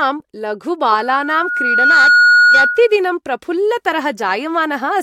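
From 0.88 s to 3.00 s a steady tone at 1.4 kHz rises out of the speech, swelling over about a second until it sits roughly 10 dB above the talker and rings as a piercing squeal. This is loudspeaker feedback squeal: the microphone was picking up the loudspeaker it was driving, and at 1.4 kHz the loop gain passed unity, so that one frequency kept reinforcing itself.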